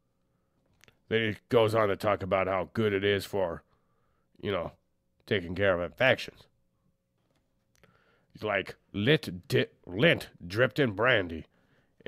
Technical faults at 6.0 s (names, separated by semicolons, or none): dropped samples